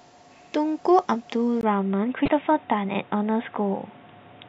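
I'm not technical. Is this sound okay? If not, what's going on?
No. From 1.61 s the speech suddenly turns dull and boxy, after a tiny gap, with a faint new hiss. This is likely an input switched to a poorer device, one that cuts everything above 3.8 kHz. From 2.25 to 2.28 s there is a short chirp or blip, caused by damaged data in a compressed stream that the player briefly misreads.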